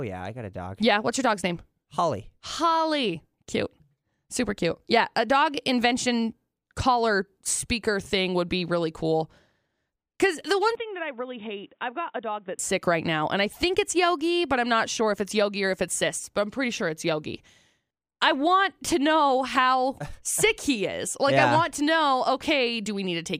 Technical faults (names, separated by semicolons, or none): input switched to a poorer device